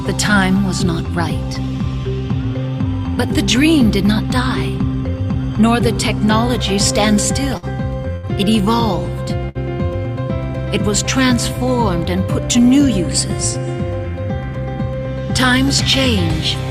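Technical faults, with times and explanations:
7.57–7.65 s, 8.16–8.26 s and 9.49–9.58 s, burst of packet loss: each time a short run of packets goes missing, so the receiver stretches the last bit of sound for roughly 50 to 65 ms, fading it down, then jumps ahead, skipping about 60 ms of audio.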